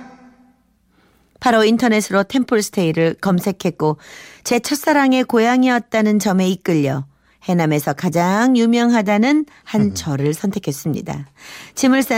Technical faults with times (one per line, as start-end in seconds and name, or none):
none